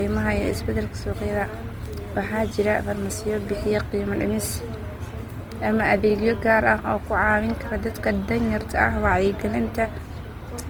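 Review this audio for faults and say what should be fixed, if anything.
The whole clip has a grainy, rough texture on the speech that's plainly audible from start to finish, and it sounds like Opus compression, most likely. The encoder seems to be in its music (CELT) mode: it holds each band's energy but, short on bits, fills the detail in with folded or noise-like content, so tone goes gritty rather than swirly. Bandwidth stays full, reaching about 20.2 kHz, and the damage fits a bitrate around 24 kbps. To prevent it, encode from the original at a higher Opus rate, or keep a lossless master.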